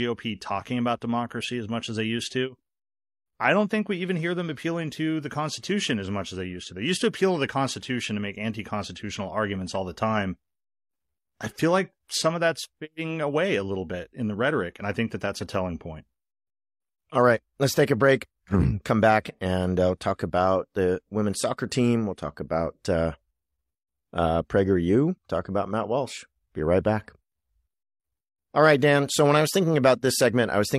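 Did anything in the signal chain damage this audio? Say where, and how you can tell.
No, nothing in the signal chain audibly damaged this speech recording, so no stage can be singled out as a source of harm.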